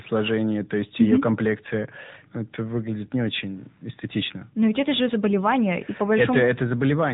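From start to finish the speech passes through the AMR narrowband mobile codec. Nothing above about 3.8 kHz survives. The vocal-tract model leaves a plainly audible buzzy, synthetic edge, which fits a higher-rate AMR-NB mode near 10.2 kbps.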